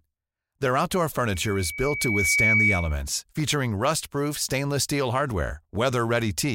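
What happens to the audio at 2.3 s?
At 2.3 s the speech is caught in loudspeaker feedback squeal, running from 1.28 to 3.03 s. The microphone picks up its own loudspeaker, and the loop gain exceeds one at 2.3 kHz. That tone swells over about a second to sit about 5 dB above the speech. On a spectrogram it shows as a bright, unbroken horizontal line.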